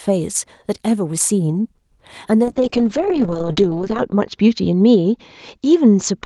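At 2.44 s a call bitrate drop begins and runs to the end. Opus codes more coarsely, which fits a fall from about 32 kbps to about 7 kbps. The top band narrows from 12 kHz to 8 kHz. The speech turns rough and muffled, worst for about 1.56 s.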